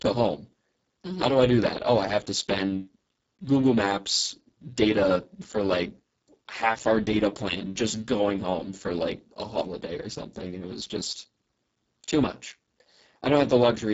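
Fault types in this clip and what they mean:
Speex codec: the speech passes through an older CELP voice codec starved of bits, with heavy damage throughout, which fits a setting of around 6 kbps. With so little left for the excitation, it sounds hoarse, noisy and edging toward robotic. Above 4 kHz there is only a hissy, shaped fill, and nothing beyond about 7.7 kHz. Unlike the watery swirls of a low-bitrate music codec, the damage sits as rasp and buzz inside the voicing itself.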